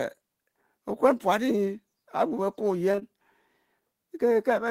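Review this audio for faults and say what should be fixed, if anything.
Short concealed packet loss occurs three times in a row, at 2.91 to 2.95 s, 2.95 to 2.99 s and 2.99 to 3.03 s. Each gap is about 20 ms of speech that arrived too late to decode. The receiver patched each hole by extending the preceding sound, then faded back into real audio. Back to back, the patches make a smeared, wobbly stretch of about 0.12 s, and a brief consonant there can drop out. Prevent it with a steadier network path and a slightly deeper jitter buffer.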